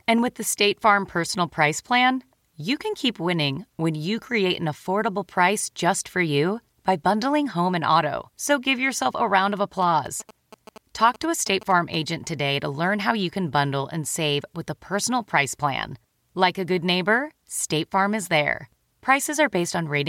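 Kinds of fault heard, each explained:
GSM signalling bursts: From 9.82 to 11.96 s a galloping dit-dit-dit of short buzzes cuts into the speech, sitting roughly 20 dB below it. The buzz is pitched at about 217 Hz, the repeat rate of a GSM handset's transmit bursts. A 2G phone nearby was exchanging short signalling bursts with the network, and the audio circuitry rectified that radio energy into this pulsed interference.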